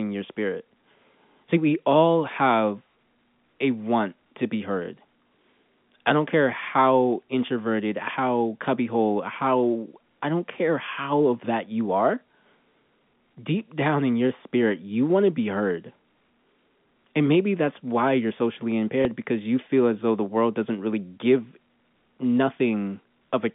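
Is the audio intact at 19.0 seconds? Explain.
No. From 19.02 to 19.05 s there is a small blip. This is packet loss with the last packet repeated: about 30 ms of audio, which fits a single lost packet, was replaced by replaying the preceding packet.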